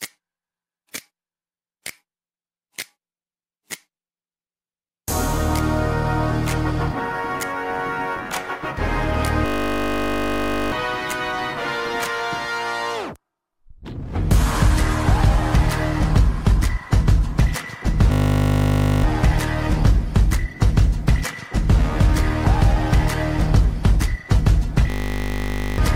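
At 9.46 to 10.72 s, 18.12 to 19.04 s and 24.9 to 25.78 s there's a system hang loop: playback froze and a 20 ms slice kept cycling, giving a steady 50 Hz buzz and dropping roughly a second or more of audio each time.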